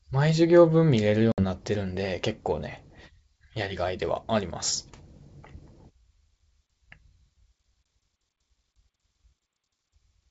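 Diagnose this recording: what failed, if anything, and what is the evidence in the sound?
Network: packet loss on the ADPCM call drops 60 ms, about three packets, from 1.32 s as a blank spectrogram band; the desynchronised predictor distorts recovery until 1.44 s.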